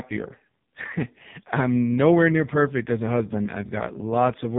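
From start to finish the speech sounds buzzy, synthetic and boxed-in, with nothing above about 3.8 kHz. This is the AMR narrowband mobile codec, rebuilding each 20 ms frame from a vocal-tract model and a few pulses. Such heavy damage fits one of its lowest bitrates, near 5 kbps.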